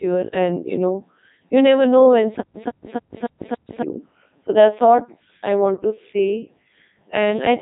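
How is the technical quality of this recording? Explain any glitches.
Quality is poor. The whole recording has been through a Codec 2 vocoder, so the damage runs from start to finish rather than showing up as separate glitches.

Codec 2 doesn't keep the waveform at all. It sends only pitch, voicing, energy and a rough spectral envelope, and the decoder rebuilds the speech from sine waves. Here that leaves the speech heavily robotic and buzzy, with nothing above about 3.8 kHz, which fits the codec's top 3.2 kbit/s mode.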